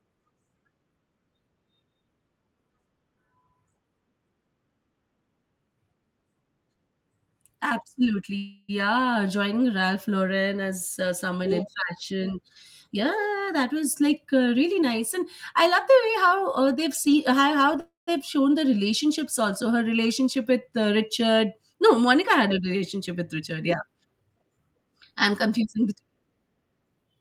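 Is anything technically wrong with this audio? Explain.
Yes, the speech has two kinds of fault.

Call audio freeze at 8.37 to 8.71 s and 17.80 to 18.09 s, just before "shown the". Packets were likely held up and the jitter buffer ran dry, so the last sound was stretched into a fading buzz. The second freeze ends in silence. Nothing is lost, but delay grows by 311 ms and 273 ms.

Jitter buffer speed-up from 12.87 to 17.34 s at 107% speed and from 23.39 to 26.15 s at 110%, right after "a relationship with". The buffer had built up excess audio, so the receiver cut short pitch-period slices, about 0.3 s in all each time. Speech sounds hurried at unchanged pitch.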